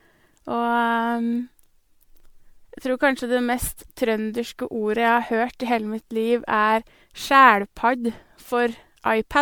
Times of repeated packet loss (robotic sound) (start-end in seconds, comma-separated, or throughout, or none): none